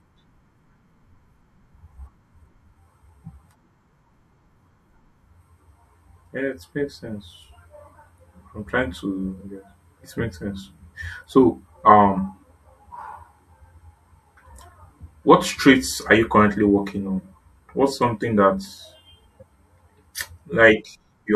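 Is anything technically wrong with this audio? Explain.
Yes. There are compressed frames skipped at 19.39 to 19.43 s in this speech clip. A short stretch of the encoded stream never reached playback, either lost from the file or rejected by the decoder as corrupt, so the audio leaps forward by about 20 ms. The speech jumps slightly ahead at that point.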